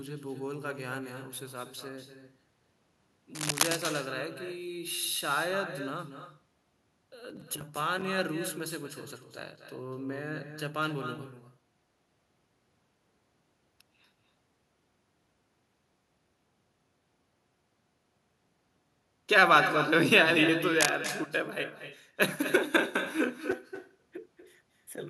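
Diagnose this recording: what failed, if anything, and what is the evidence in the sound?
Echo with no canceller, at the call-processing stage. Speech is shadowed throughout by a copy about 10 dB quieter, roughly a fifth of a second late. Far-end loudspeaker pickup returns uncancelled.

Cable scratch noise, in the analogue wiring. Rough rustling bursts, roughly as loud as the speech, occur at 3.35–3.76 s and 20.76–20.95 s. Likely a worn connector changing contact resistance.

Processor overload crackle, at the driver or buffer stage. Gritty crackle runs from 7.30 to 8.02 s and from 23.51 to 23.82 s. Missed deadlines leave short hard-edged silent gaps, fitting buffers of around 5 ms.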